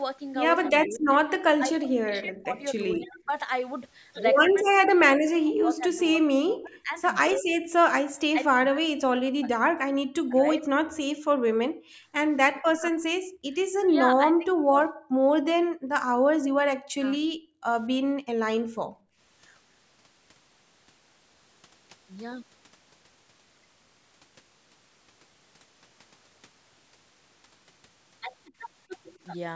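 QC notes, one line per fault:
0.67–10.63 s, 12.54–14.79 s and 16.84–17.05 s, speech suppressed in double talk: the talker's speech dips by up to around 40 dB in pieces, about seven seconds in all. The likely cause is the echo canceller failing to separate near speech from loudspeaker echo while both sides spoke, and turning both down.
11.2–13.44 s and 15.07–19.18 s, background gated by the echo canceller: the room sound drops by up to about 40 dB in the first stretch and about 31 dB in the second, roughly 0.7 s and 1.5 s in total. The canceller clamped the microphone while the loudspeaker played, then released it.
29.15–29.19 s, echo leak: a brief, faint scrap of delayed sound, 237 ms behind the original and roughly 40 dB below the speech. This is likely loudspeaker pickup that one side's echo canceller failed to remove and sent back down the line.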